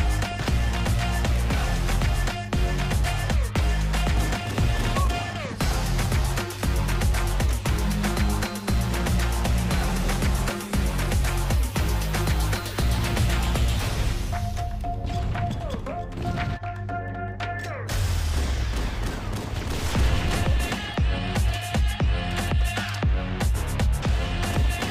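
No technical faults can be heard anywhere in the audio; the signal stays intact and steady throughout.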